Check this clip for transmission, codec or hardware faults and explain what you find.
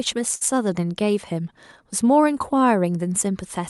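One transmission fault stands out in this speech clip: a short burst of packet loss near the start.

From 0.35 to 0.43 s, a burst of packet loss interrupts the audio. The receiver stretched the last received sound for about 54 ms, fading it down. About 60 ms of speech never arrives. The speech then jumps ahead, leaving an audible skip.

The call path's band limit near 12 kHz can also be heard in the top end.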